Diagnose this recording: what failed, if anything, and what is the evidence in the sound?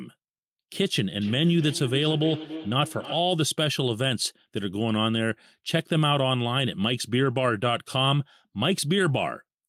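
Call processing: from 1.21 to 3.3 s the speech keeps coming back roughly every third of a second, about 13 dB down. That's feedback echo between two devices: one plays the call, and the other's mic picks it up again.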